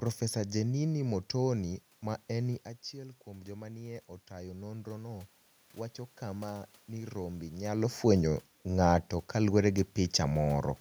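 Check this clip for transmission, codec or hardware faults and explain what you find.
One fault, an automatic gain rise. From 2.96 to 5.36 s, between "ma eni" and "wacho kama nii rombe", the gain control reacts to a drop in input level of about 13 dB, which follows the talker moving away from the microphone around 2.5 s. It raises its gain by about 5 dB over those 2.4 seconds. Because the increase is gradual, the voice and the room noise swell together. The background lifts rather than the voice alone recovering.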